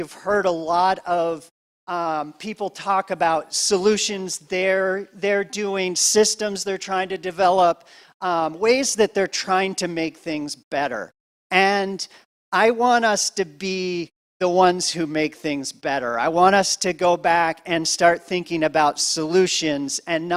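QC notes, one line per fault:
Nothing stood out on a careful listen.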